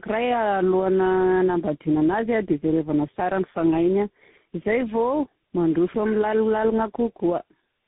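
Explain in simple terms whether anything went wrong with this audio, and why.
The speech sounds rough, muffled and warbly from start to finish, with nothing above about 3.8 kHz. This is tandem speech coding: the call likely passed through three different speech codecs in a row, each one re-squeezing the previous one's already damaged sound.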